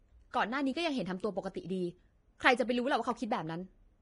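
A speech recording with heavy codec damage throughout: the treble is hissy and grainy, tones have a roughened edge, and nothing is present above 10.6 kHz. On a spectrogram this appears as a hard horizontal ceiling at 10.6 kHz, with the band beneath it broken into speckled, noise-like patches. The likely cause is low-bitrate Vorbis compression, and the damage fits a rate of around 30 kbps. Its coarse quantisation replaces fine high-frequency detail with noise of similar energy. Pre-echo occurs from 0.31 to 0.34 s, where a short hiss runs about 28 ms ahead of a sharp attack, leaving the onset soft and smeared. This happens because the transform block spreads noise sized for the loud attack across the quiet moment before it. In the waveform, a thin fuzz of low-level noise rises before the transient, and on a spectrogram a vertical smear of broadband energy leads into it.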